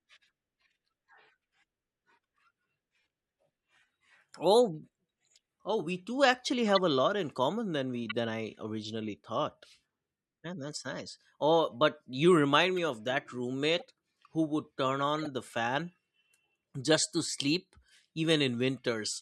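Short chirps and noisy blips cut through the speech at 6.68–6.79 s, 8.04–8.12 s, 12.77 s, 13.79–13.82 s and 15.18–15.27 s, the first two loudest. Each is a corrupt frame decoded: damaged compressed data played anyway, putting energy at wrong frequencies for one or a few frames.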